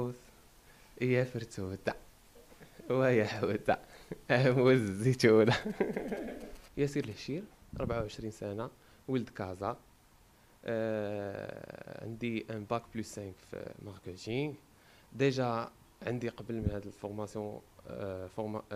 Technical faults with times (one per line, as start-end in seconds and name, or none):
4.67-7.13 GSM signalling bursts